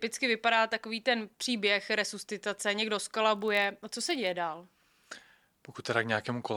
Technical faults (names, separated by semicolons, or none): block size mismatch (padded)